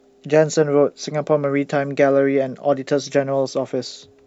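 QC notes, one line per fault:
No fault found; no QC notes to log.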